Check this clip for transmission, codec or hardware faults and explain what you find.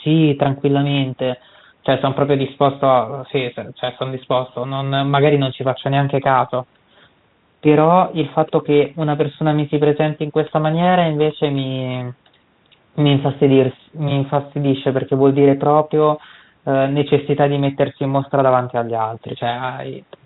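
Nothing here points to a transmission, codec or hardware problem; the speech comes through a G.726 ADPCM link at 32 kbit/s, so it sits within the telephone band below 4 kHz and carries just the light coding roughness you'd expect at that rate.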